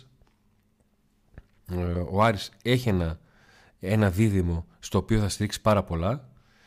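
Nothing in the speech stood out as a technical problem on listening.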